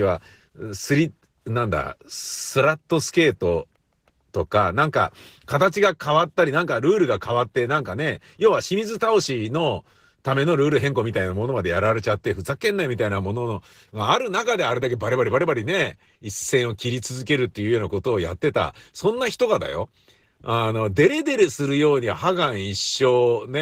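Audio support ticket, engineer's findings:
Opus voice compression, whole clip. Speech sounds plainly coded: hoarse and slightly robotic. Full bandwidth kept. Hybrid mode likely: SILK below 8 kHz, CELT layer above. Coarse excitation coding at low rate, which fits about 16 kbps in 20 ms frames.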